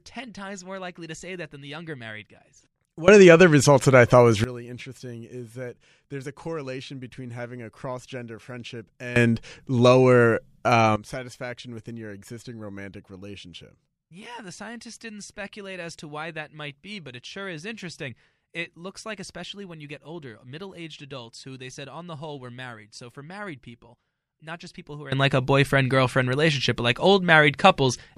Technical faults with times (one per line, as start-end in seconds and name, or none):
3.08-4.44 sudden gain jump
9.16-10.96 sudden gain jump
25.12-28.18 sudden gain jump